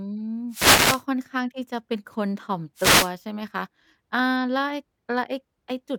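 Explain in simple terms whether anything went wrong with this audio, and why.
Two brief bursts of static, at 0.49 to 1.04 s and again at 2.76 to 3.11 s, are a wireless microphone noise hit. The mic sends its signal by radio, and when reflections of that signal cancel each other out, it weakens for a moment. The receiver's own hiss then rises and washes over the speech, so you hear a quick swish instead of a clean voice.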